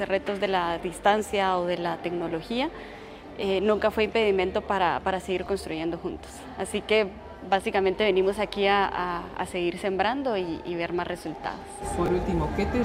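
At 5.46 to 5.48 s the sound briefly jumbles. This is chunks out of order. A 10 ms chunk arrived late and played one chunk after its proper place. No audio is missing. The order is simply swapped, and the swap leaves three hard joins. The same fault returns at 12.06 to 12.08 s, again one 10 ms chunk played one position late, with the same garbled moment.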